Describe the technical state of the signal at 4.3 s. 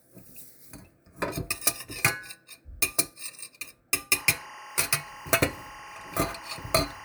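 A steady chirping warble sits behind the sound at 4.3 s, a rapid flutter between two pitches near 1 and 2 kHz, roughly 15 dB below the sound. This is timecode bleed, running from 4.13 s to the end of the clip at 7.05 s. Linear timecode at 24 frames per second has leaked from a neighbouring track or cable. Its square-wave code flips between those two frequencies as it encodes each frame's bits, producing the chirping.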